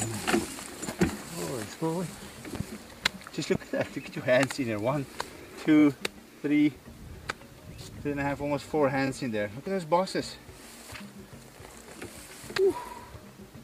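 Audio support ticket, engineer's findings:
Loud pop, 2.55–2.63 s: double pop, sharp, about 10 dB above the audio, which continues underneath. Second loud pop at 3.55 s: single, harder, about 15 dB up. Likely a voltage step from a connector, switch or driver glitch, shaped by downstream circuitry.

Repeated frames, 5.78 s: brief stutter. One 23.2 ms block replays twice, adding 46.4 ms. Again at 9.06 s, one extra play, adding 23.2 ms. The block length fits a 1024-sample codec frame at 44.1 kHz, resent or rewritten before decoding.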